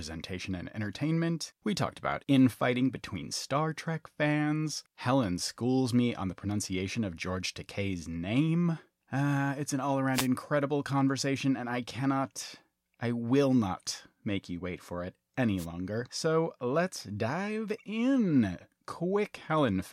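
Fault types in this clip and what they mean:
Wireless microphone noise hit: two short bursts of hissing static sweep over the speech, about 0.14 s at 10.13 s between "it's an all" and "conversation and I cannot", and about 0.09 s at 15.57 s just after "you wait for it". Each is a brief swish. The radio link of an analogue FM microphone faded as reflected signals cancelled, so receiver noise briefly rose above the weakened carrier.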